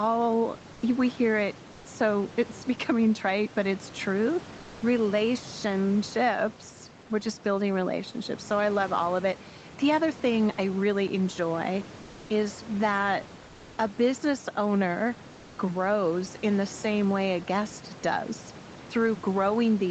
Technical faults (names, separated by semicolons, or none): comfort noise in place of the background